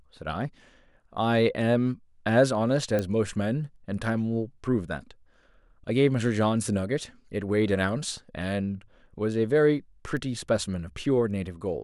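At 2.99 s and 10.17 s the speech carries a sharp broadband tick, loud at about -13 dBFS, then fainter at about -25 dBFS. Each is a bit error spike: a flipped bit throws one or two samples off by a power of two before returning.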